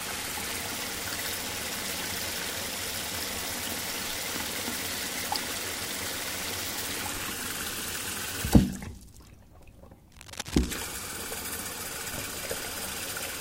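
A short recording of sounds carries a burst of cable scratch noise from 10.12 to 10.74 s: a dense, ragged rustling and crackling laid over the sound for a little over half a second, sitting roughly 10 dB below the main signal. The cause is likely a worn cable, connector or control being moved, so its contact resistance jumps about rapidly and injects uneven noise bursts into the signal path.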